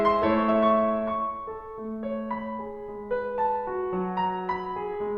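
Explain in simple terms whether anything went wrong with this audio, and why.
Nothing went wrong here: the music carries on steadily without any dropouts, glitches or odd noises to catch your ear.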